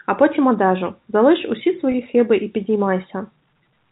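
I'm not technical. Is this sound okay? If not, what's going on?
No. Packet loss with pitch repetition occurs at 1.92 to 1.94 s, between "потім одежу залиш усі" and "хиби і". About 20 ms of audio went missing in transit, and the receiver filled the hole by repeating the last bit of voice, so there's a brief held, buzzy blip.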